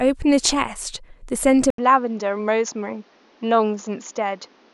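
An input switch to a poorer device, likely, begins at 1.70 s and lasts to the end. An 80 ms gap marks the change. The speech then loses everything above 7 kHz, sounds duller, drops roughly 5 dB in level, and picks up a new, faint background noise.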